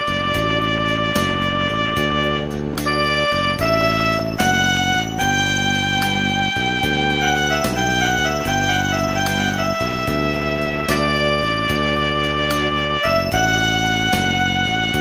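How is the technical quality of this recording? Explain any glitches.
Two short faults stand out in the recording.

At 2.73 to 2.75 s, 20 ms of sound drops out and a flat, steady noise briefly takes its place before the audio resumes. The likely cause is a voice detector in a discontinuous-transmission codec such as Opus misjudging that moment as background, halting transmission and letting the receiver fill in comfort noise. What distinguishes this from a packet loss is that the gap is filled with smooth, featureless noise rather than a click, a repeated fragment or dead silence, and the sound returns cleanly once the detector triggers again.

From 3.81 to 4.77 s, six small ticks arrive at a regular rate of roughly six per second, each lasting only a few milliseconds. These are CD scratch ticks. A blemish on the disc corrupts more data than error correction can rebuild, once per revolution, and the player interpolates over or mutes the damaged samples each time. 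Their steady spacing, tied to disc rotation, distinguishes them from random crackle or digital clipping.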